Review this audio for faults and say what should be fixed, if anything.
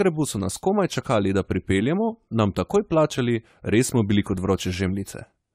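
Generation loss runs throughout the speech. It sounds swirly, smeared and hollow, with blurred attacks and nothing above 16.1 kHz. This likely comes from about ten rounds of AAC-LC decoding and re-encoding near 96 kbit/s, each adding fresh quantisation noise. Work from the original source and encode only once.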